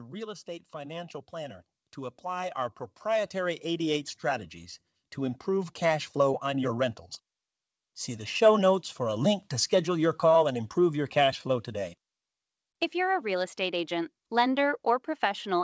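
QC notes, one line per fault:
0.45–6.92 s, automatic gain rising: the gain control judged the input too quiet and kept raising its gain for more than six seconds, by about 14 dB in total. The speech swells steadily louder, and the background noise swells with it at the same rate. This shared rise shows the loudness change comes from the gain stage rather than the talker. The band still stops at 8 kHz throughout, as the wideband call codec path normally does.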